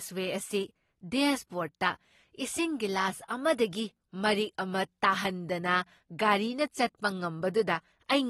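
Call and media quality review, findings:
AAC compression, throughout: dull speech, nothing above 12.5 kHz, fizzy warble on sibilants, unlike plain low-pass filtering; likely AAC-LC quantising coarsely, fitting 32 kbps.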